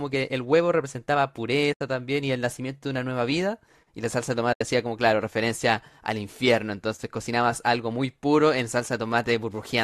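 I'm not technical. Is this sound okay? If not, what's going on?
No. The speech drops out twice, from 1.73 to 1.81 s and again from 4.53 to 4.61 s, each gap lasting about 80 ms. This is AAC frame loss with muting. A short run of the compressed audio's data went missing, and the player filled the hole with silence. Unlike a plain cut in the recording, the edges are soft. The sound fades out and back in rather than snapping off.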